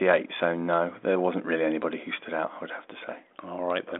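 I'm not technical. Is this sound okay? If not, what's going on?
Yes, this speech sounds fine and nothing in it is faulty; it has the slightly narrow, phone-line quality you'd expect from a telephone call, since nothing above about 3.8 kHz comes through.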